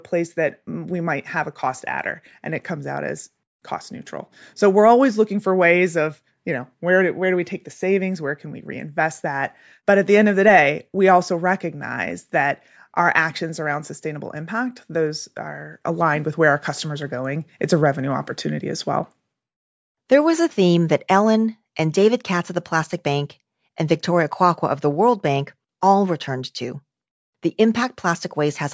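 No dropouts, clipping, glitches or other transport faults can be heard anywhere in the speech.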